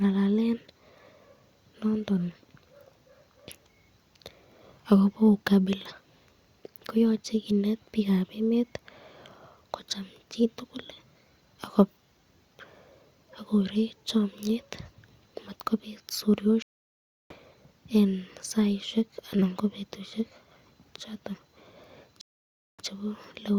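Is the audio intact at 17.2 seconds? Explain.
No. A stream reconnect spans 16.62 to 17.34 s. The link dropped, leaving 0.68 s of silence. A fresh decoder resumed the speech roughly 0.7 s further on.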